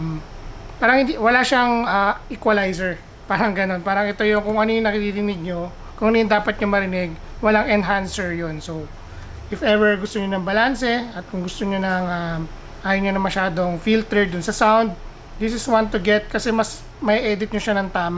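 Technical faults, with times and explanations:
No technical faults can be heard anywhere in the clip. There is nothing here that needs a time or an explanation.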